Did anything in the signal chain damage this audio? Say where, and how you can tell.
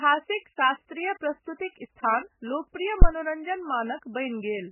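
Yes, two things. Across the whole clip the speech is heavily smeared and watery, with nothing above 3 kHz. That points to the codec stage, and the likely culprit is MP3 compression at a very low bitrate, in the region of 8 kbps. When bits are that scarce, the encoder throws away weaker frequency lines, which then flicker in and out from frame to frame. It also cuts the top end at a fixed point, which is why the treble just stops.

The second is in the analogue front end: a phantom power thump from about 3.02 to 3.08 s. It's a deep low thud that dies away in roughly 14 ms. That's what you get when phantom power or another supply is switched on a live input. The voltage step travels through the coupling capacitors and comes out as a single low-frequency bump rather than anything tonal.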